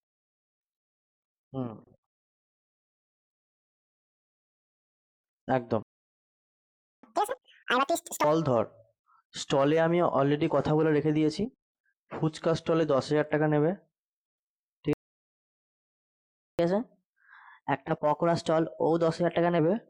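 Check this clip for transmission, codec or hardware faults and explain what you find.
The speech is interrupted twice by playback stalls, each followed by a catch-up at higher speed.

Playback stall at 5.83 to 7.03 s (1.2 s) and 14.93 to 16.59 s (1.66 s): the speech cuts off mid-flow into dead silence, most likely because the player ran dry or its thread was blocked. The waveform shows a flat line and the spectrogram a blank vertical band.

Catch-up at higher speed at 7.03 to 8.24 s (2.0×, pitch up roughly ten semitones) and 16.59 to 19.59 s (1.1×, pitch up about a semitone and a half): the player resamples its backlog to regain lost time. The spectrogram shows harmonics shifted upward and compressed in time before returning to normal.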